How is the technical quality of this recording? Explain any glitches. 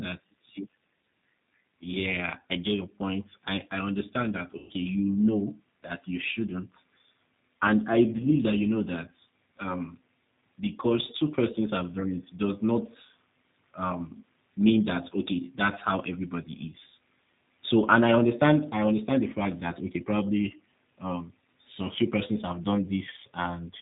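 The technical quality is limited. A low-bitrate speech codec colours the whole recording, and two short dropouts were patched over by that codec.

The G.729 codec damage is plainly audible throughout. The sound fits an 8 kbit/s G.729A stream. The codec models speech with a vocal tract filter, a pitch predictor and a few pulses per frame. It does not keep the real waveform. Nothing above 4 kHz survives. The speech therefore sounds muffled, slightly rough and synthetic.

VoIP packet loss concealed by the speech codec occurs twice. From 4.58 to 4.73 s, right after "I I understand that", about 120 ms of audio is missing. From 8.17 to 8.23 s, just before "that you know that", about 30 ms is missing. Each time, the decoder extended its last pitch and filter settings and lowered the gain frame by frame. The gap becomes a stretched, fading buzzy tone or coloured noise. Speech stays weak briefly after it returns.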